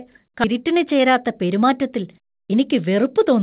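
Speech, carried over what sounds like a G.711 A-law call path at 64 kbps, with nothing above 4 kHz. At 0.44 to 0.46 s there is a skip ahead. Playback jumps forward with no gap filled in. Roughly 0.7 s of speech is gone. The audio on either side is butted straight together. A chunk was dropped in transit or discarded when the jitter buffer overflowed, while later audio was already queued. The join sounds abrupt, and the delay falls by about the same amount. From 0.54 to 3.38 s a jitter buffer speed-up follows. The speech runs at about 108 percent of normal speed. Pitch stays unchanged. The receiver is trimming short slices of one or a few pitch periods, over and over. This sheds about a fifth of a second of held-up audio. The buffer had filled past its target, likely after late packets arrived in a burst. The result sounds hurried throughout.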